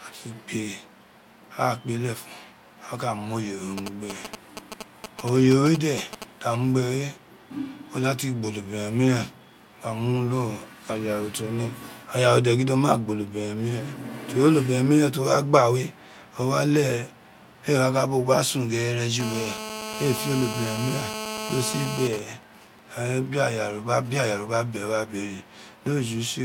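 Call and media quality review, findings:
GSM signalling bursts, 3.78–6.24 s and 22.13–24.23 s: galloping dit-dit-dit of short 217 Hz buzzes, then even ticks with a longer buzz twice a second, roughly 10 dB then 20 dB under speech. Nearby 2G phone's intermittent radio bursts rectified by audio circuitry.

GSM phone buzz, 19.20–22.08 s, right after "sun ghere": steady, hard, raspy 217 Hz buzz, harmonic-rich, about 8 dB under speech. 2G phone in a call, transmit bursts rectified in the audio path.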